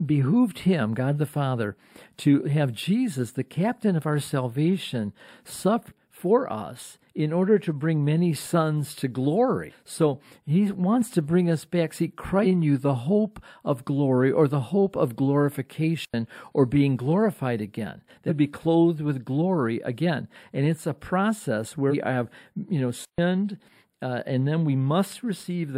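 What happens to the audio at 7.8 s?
At 7.8 s the speech carries channel delay (comb filtering), which runs through the whole clip rather than starting there. One channel lags the other by a tiny fraction of a millisecond, a few samples, and when they are summed to mono the highest frequencies partly cancel, with the first notch near 7 kHz. The result is dull, hollow sibilance. A spectrogram shows a fixed dark horizontal band around 7 kHz that stays put regardless of the speech, while the waveform looks largely unchanged.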